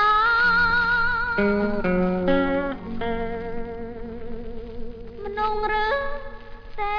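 Nothing stood out as a technical problem on listening.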